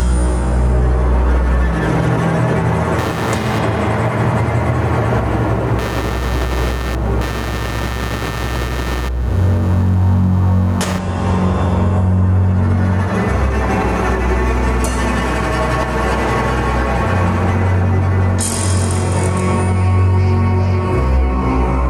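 Gain pumping runs throughout: the input gain is likely set far too high, so a fast limiter pulls it down on every loud sound, making the gain swing by around 10 dB. From 2.98 to 10.98 s there is computer activity noise: processor or peripheral load disturbs the shared audio ground, adding noise pulsing at around 100 Hz, roughly 15 dB below the sound.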